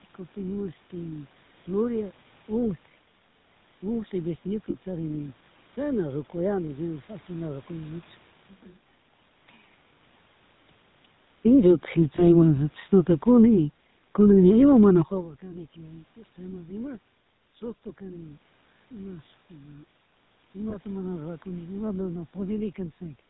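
Speech that's been through the GSM full-rate codec for the whole clip, so everything has that buzzy, gravelly edge and nothing above 4 kHz, from coarse pulse-driven vocal-tract modelling at 13 kbps. There are lost GSM frames at 4.70 to 4.76 s, 12.16 to 12.24 s and 20.70 to 20.76 s, just before "mana rurakuni". Each gap is filled by repeating the last good frame, giving a short metallic ring. The first lasts about 40 ms, which fits two frames, and the others about 20 ms. From 11.47 to 15.49 s there's automatic gain falling: the gain control judged the input too hot or its background too noisy and eased it down by about 8 dB, so voice and background sink together.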